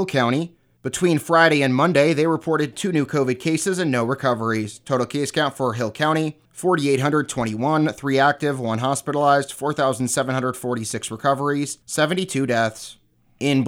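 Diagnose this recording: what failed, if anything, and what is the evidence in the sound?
Nothing failed; no fault is audible anywhere.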